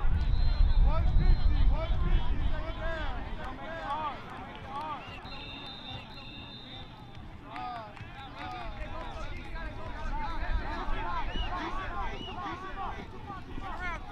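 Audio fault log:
Throughout, doubled audio track: a second full-band copy trails the original by about a second, roughly 5 dB quieter, likely from an out-of-step duplicate path. Unlike echo or reverb, it repeats once, with no decay, filtering or room colour.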